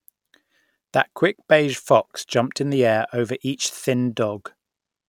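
Nothing faulty is audible anywhere in this speech recording.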